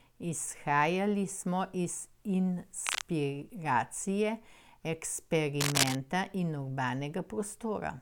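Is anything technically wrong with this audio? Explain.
Yes. Two bursts of cable scratch noise occur, from 2.84 to 3.06 s and from 5.60 to 5.95 s. They are dense, uneven rustling over the speech. The first sits about 5 dB below it, the second about level. A worn cable or connector being moved is the likely cause.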